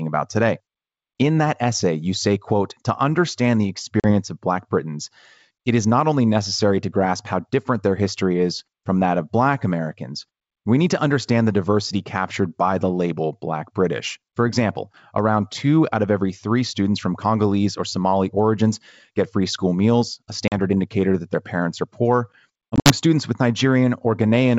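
Packet loss on an ADPCM call cuts hard-edged silent gaps into the speech. At 4.00 s, after "quote to understand the", about 40 ms drops out. At 20.48 s, between "free school meals a" and "indicator that their parents", another 40 ms goes. From 22.71 to 22.92 s, after "their parents are poor" and before "students with", about 100 ms is lost in pieces over roughly 160 ms, the longest run 60 ms, which fits about five lost packets. After each hole the decoder's predictor and step size no longer match the sender's, so the speech returns slightly distorted and settles within tens of milliseconds. The G.722 coding underneath is running at 64 kbit/s.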